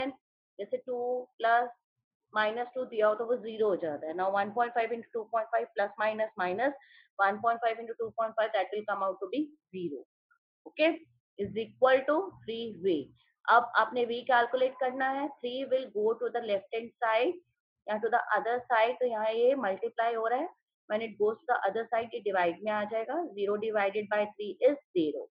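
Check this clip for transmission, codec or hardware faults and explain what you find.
No faults found; the audio stays steady throughout, with nothing to report.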